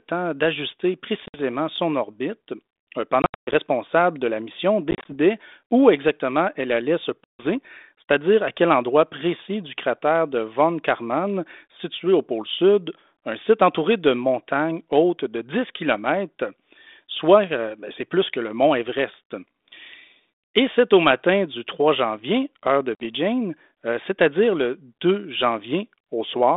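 Packet loss on an ADPCM call at 1.26–1.39, 3.22–3.54, 4.91–5.16, 7.24–7.44 and 22.95–23.06 s leaves abrupt silent holes; the decoder's predictor and step size lose sync, so speech resumes slightly distorted.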